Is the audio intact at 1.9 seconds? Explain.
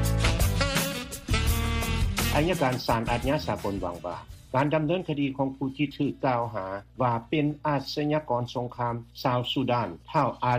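No. Mains hum is present at 1.9 seconds, as it is across the whole clip. A ground loop or a nearby transformer is letting the 60 Hz power line leak into the signal path, so a steady low tone at 60 Hz, with some low harmonics above it, sits under the sound at roughly 30 dB below the signal.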